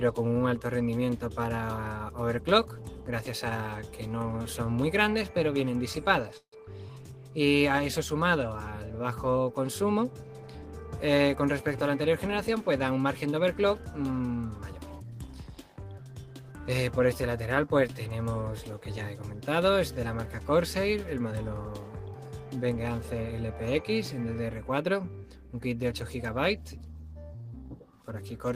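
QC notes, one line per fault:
6.37–6.54 s, call audio freeze: the sound stalls for about 170 ms. The last sound is stretched into a short decaying buzz or hiss that drops to silence for about 60 ms before the audio resumes exactly where it left off. About 150 ms of filler is inserted, nothing is lost, and everything after it runs 150 ms later. This pattern is likely packets held up in transit that left the jitter buffer empty until they arrived.
11.23–13.17 s, jitter buffer speed-up: the sound plays about 8% fast for nearly two seconds at unchanged pitch, so it comes across as hurried rather than higher. The receiver is trimming many short pitch-period-length slices in succession to drain excess buffered audio. In total roughly 150 ms is removed, which brings latency back toward its target.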